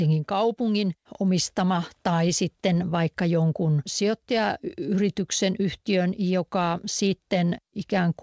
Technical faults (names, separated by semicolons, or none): none